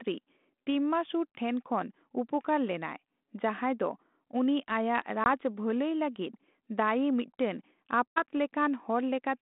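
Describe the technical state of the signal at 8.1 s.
Packet loss on this 32 kbit/s ADPCM call drops about 80 ms, roughly four packets, from 8.12 to 8.22 s, leaving a hard-edged silent hole. The decoder's predictor and step size fall out of step, so speech resumes slightly distorted before settling.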